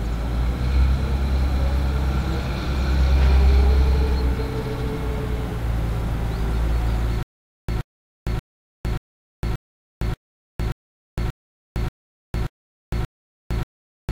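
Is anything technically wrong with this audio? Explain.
Yes. From 7.23 s to the end, there is a stutter with silent gaps. The playback likely stalled and, at each retry, replayed the last fragment it held before running dry. A burst of about 124 ms repeats 11 times, each followed by 458 ms of dead digital silence, so it returns every 582 ms at a steady, mechanical pace. Whatever audio should have played after 7.23 s never arrives.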